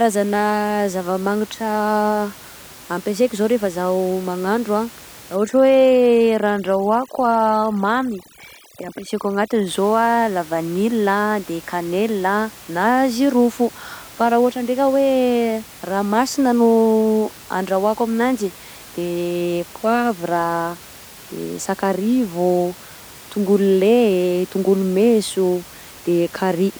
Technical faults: overdone noise removal

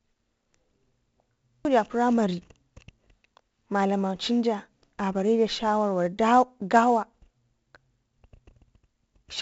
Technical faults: 4-bit ADPCM compression

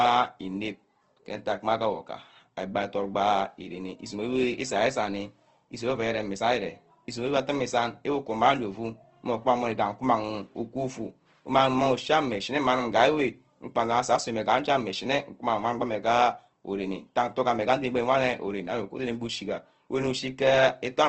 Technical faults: Opus compression

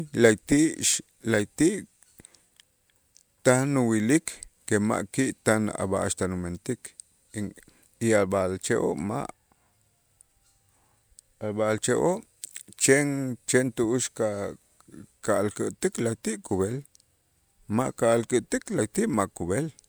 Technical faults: none

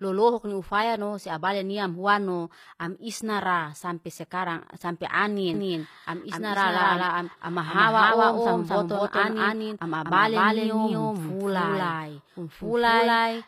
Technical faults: HE-AAC compression; doubled audio track

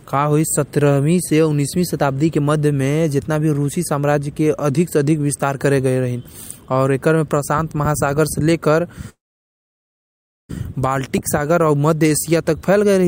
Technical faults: call audio freeze

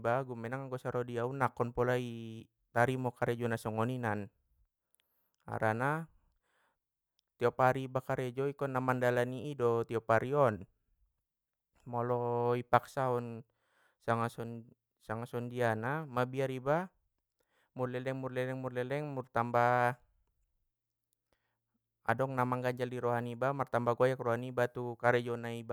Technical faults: none

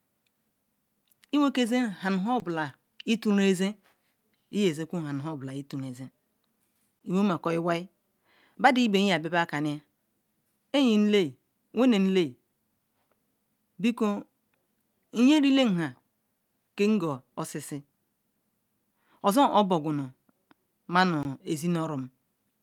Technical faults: block of digital silence

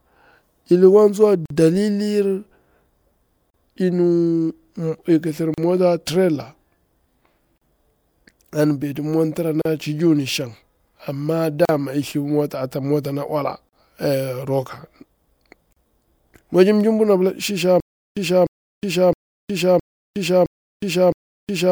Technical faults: gap at a join of encoded pieces; stutter with silent gaps

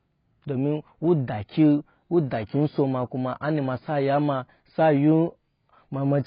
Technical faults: AAC compression

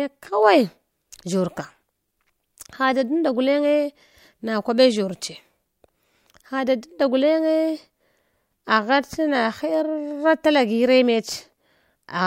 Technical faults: none

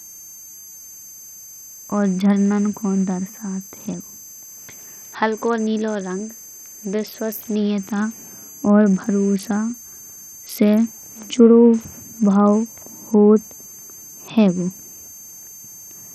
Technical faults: switching supply whistle; Bluetooth SBC compression

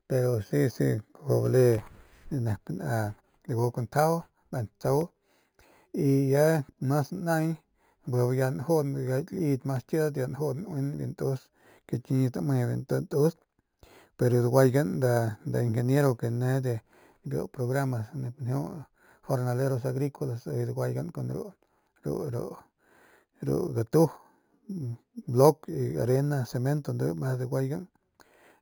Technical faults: imaging from sample-and-hold upsampling

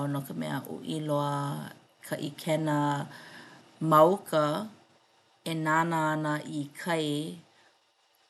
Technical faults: none

